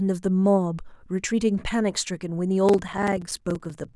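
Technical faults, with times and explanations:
2.65–3.95 s: block size mismatch (padded). Short zero-filled gaps in each block give a 20.8 Hz buzz and slow the speech to 0.889×, which fits 1024-sample writes.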